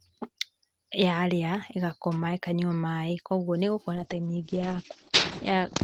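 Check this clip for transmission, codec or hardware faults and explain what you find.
One fault is present: a call bitrate drop near the end of the speech. From 3.96 s to 5.83 s, the encoder's bitrate falls from 32 kbps to 11 kbps, staying at its lowest for 1.58 s. A falling bandwidth estimate told the Opus encoder to spend far fewer bits. It codes more coarsely and narrows the audio band from 20 kHz to 8 kHz. The speech turns muffled and dull, losing its crisp top end, with a rough, watery texture.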